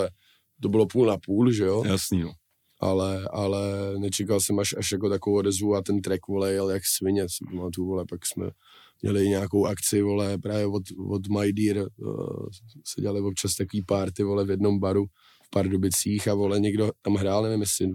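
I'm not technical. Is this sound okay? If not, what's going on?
No. Two devices likely keep separate, unmatched clocks and slip a sample repeatedly. These clock slip clicks make a faint, fast rattle, about fourteen ticks per second, from 0.15 to 17.92 s.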